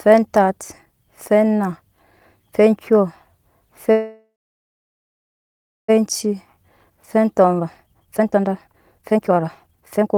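A call audio freeze from 3.91 to 5.90 s interrupts this speech clip: the sound trails off into about 1.6 s of silence, likely because delayed packets emptied the jitter buffer, and then resumes with nothing lost. Then a jitter buffer speed-up from 6.26 s to the end plays the speech at 139% speed with unchanged pitch, as short pitch-period pieces totalling about one and a half seconds are removed to recover the built-up delay.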